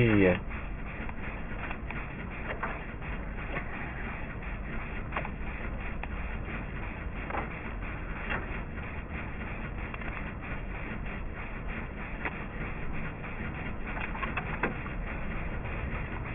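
Aliasing runs through the whole clip: the audio sounds gritty and metallic, with high-frequency content folding back as unrelated, inharmonic tones, fairly strong at roughly 10 dB below the wanted signal. The sound points to a drop to about a 6 kHz sample rate without an anti-aliasing filter, so anything above 3 kHz reflected downward. On a spectrogram, energy runs hard right up to a 3 kHz ceiling, with mirrored streaks sloping the wrong way beneath it.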